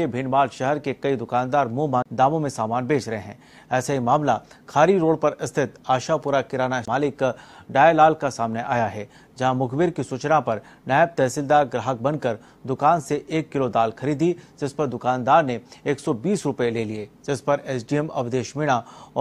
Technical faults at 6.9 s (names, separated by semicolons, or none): CD skip